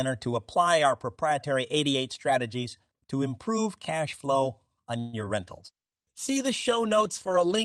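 A speech recording with three network faults clustered near its end. Just after "improve cash flow on", from 4.99 to 5.15 s, the sound stalls and the last moment is stretched into a buzzy, fading hum for about 136 ms before speech resumes from where it left off. Nothing is lost and there is no true silence. This is likely a call audio freeze, where delayed packets drained the jitter buffer and the receiver extended the final sound to cover the wait. On a spectrogram the last frame's harmonics run on as flat horizontal bands that dim before the real speech returns, and the waveform shows a smoothly decaying stretch with no new syllable shapes. Right after "cash flow on your", from 5.25 to 5.28 s, there is a brief smear: short concealed packet loss. A few hundredths of a second never reached the decoder, so it continued the previous sound and crossfaded back, leaving a tiny blurred patch on the spectrogram. 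From 5.48 s to the end, following the same words, a call bitrate drop from 64 to 14 kbps makes the audio rough and muffled, and the spectrogram's upper frequencies thin out or vanish.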